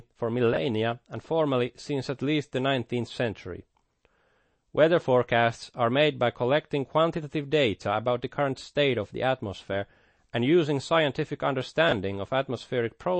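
A speech recording with a watery, swirly quality throughout: the treble stops dead at about 8.3 kHz, and fine detail seems to flicker in and out, so s sounds turn metallic and consonant attacks smear. The likely cause is MP3 compression at a low bitrate, plausibly around 32 kbps. Short of bits, the encoder imposes a hard upper cut-off and drops weak frequency components that then switch on and off between frames, producing the churning texture. Two brief garbled moments, from 0.53 to 0.57 s and from 11.89 to 11.92 s, are chunks out of order. Each is a tiny jumbled blip, where a small piece of audio plays two positions later than it should. The segments' length fits chunks of about 11.6 ms. Nothing is missing, but the wrong ordering creates three hard joins at each spot.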